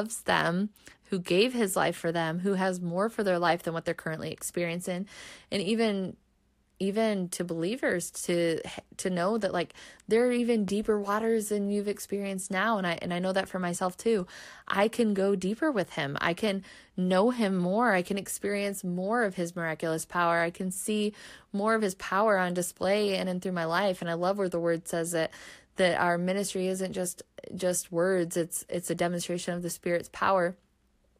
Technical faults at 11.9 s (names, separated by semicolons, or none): none